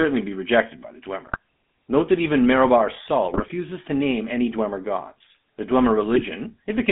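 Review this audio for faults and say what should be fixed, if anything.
The speech has a constant buzzy, gravelly roughness, and the band runs only from about 200 Hz to 3.5 kHz, so sibilants lose their edge. This is the GSM full-rate codec, and the damage is plainly audible. It rebuilds the voice from a vocal-tract filter driven by coarse, regularly spaced pulses, which fits its 13 kbps rate. That thin excitation is what produces the grit. To prevent it, carry the call over a wideband or modern codec such as AMR-WB or EVS instead of full-rate GSM.

Three short bursts of squawking, popping and gargling break through the speech. The first runs from 1.27 to 1.37 s, just after "be rejected by the". The second runs from 3.32 to 3.54 s, just before "to name any". The third runs from 6.12 to 6.28 s. These are GSM bit errors. Corrupted filter, pitch and gain values reached the decoder, so each damaged frame came out with a bent spectrum or a level jump. 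The error rate points to roughly 1.5% in the first two bursts and under 1% in the last. To prevent this, strengthen the radio link or add error concealment that mutes or repeats frames that fail their checks.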